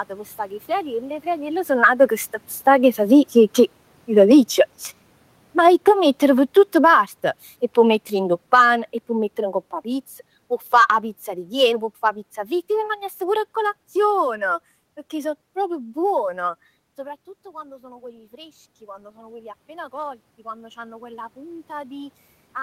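It's a speech recording, and the level keeps moving because of automatic gain control. From 2.52 s to 14.62 s you get automatic gain falling: the talker moves around 1 s, and the AGC backs its gain off slowly, by about 15 dB in total. Voice and room noise sink together rather than the voice alone dropping, which tells you it's the gain stage and not the talker.

There's also automatic gain rising, in two places. The first is a short bump inside that long fall, from 8.61 s to 9.0 s, where the gain comes back up by about 4 dB before carrying on down. The bigger one runs from 17.43 s to 22.22 s. The talker moves again around 16.5 s, the input drops by about 18 dB, and the AGC spends nearly five seconds pulling it back up by about 9 dB. You hear the voice and the room noise swell up together over that stretch.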